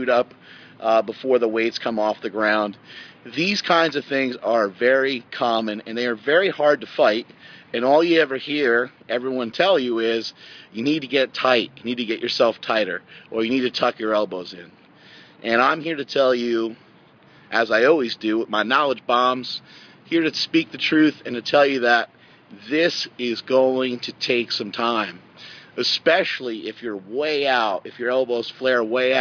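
No technical faults can be heard anywhere in the clip. Nothing in the audio calls for comment or correction.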